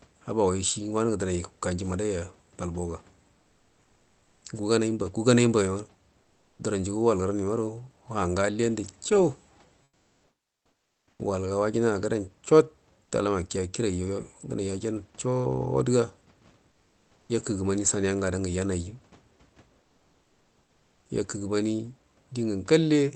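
Five pauses carry comfort noise in place of the background, likely from Opus discontinuous transmission: 3.39–4.41 s (about 2 dB quieter), 6.21–6.59 s (about 7 dB), 9.83–11.19 s (about 8 dB), 16.71–17.29 s (about 4 dB) and 19.81–21.09 s (about 1 dB). The real room noise gives way to a flat, textureless hiss, which shows on a spectrogram as smooth, uniform patches and in the waveform as a drop in the noise floor. At 17.26–17.29 s, the onset is clipped by the voice detector, likely because it reacted late. Thirty milliseconds are missing, so the sound starts abruptly, and the waveform jumps straight from the noise floor to full level.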